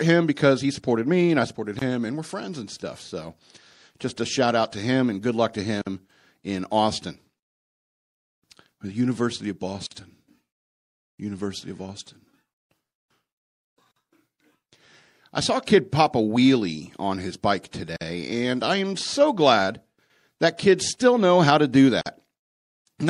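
Throughout the speech, the sound is watery and swirly, with sibilants breaking into metallic chirps and consonant attacks smeared. This points to MP3 compression, likely at around 64 kbps, where the encoder runs short of bits, cuts the treble at a fixed frequency and drops weak spectral lines. On a spectrogram there is a hard flat ceiling in the highs and speckled holes that flicker between frames.

The first gap at a join of encoded pieces comes at 1.79 s and lasts about 24.5 ms. Further gaps of 49 ms follow every 4 s, at 5.82, 9.87, 13.91, 17.96 and 22.01 s. Each is a short dropout, after which the speech resumes exactly where it stopped. Separately encoded pieces were joined with the encoder's start delay and end padding left in. On the waveform, each gap is a flat notch with slightly softened edges. On the spectrogram, it is a thin vertical blank stripe.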